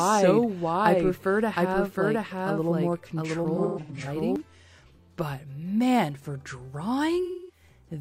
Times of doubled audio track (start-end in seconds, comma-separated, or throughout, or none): 0.00-4.36